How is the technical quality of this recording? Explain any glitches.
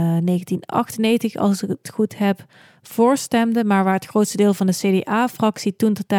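Nothing in this speech recording stands out as a glitch; I couldn't find anything that breaks or interrupts the sound at any point.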